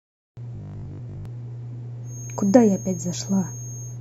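The output device fell asleep during the 0.3-second silence that opens the speech and was still waking when sound resumed. The result is a clipped start after a pause: from 0.30 to 0.37 s about 70 ms is swallowed, so the first sounds are missing and speech begins abruptly.

From 0.55 to 1.25 s the speech turns robotic. New audio was likely arriving too seldom, so short buffers were repeated in place of real audio, with most of that stretch made of repeats. The repeats impose a rigid 50 Hz buzz, which fits a 20 ms buffer, and the speech becomes metallic while still roughly following its shape.

From 2.01 s to the end there is a feedback whistle, likely from a loudspeaker-to-microphone loop held just short of runaway. A single thin tone at 6.5 kHz sits behind the speech, about 15 dB below it, swelling and fading slowly in level without growing.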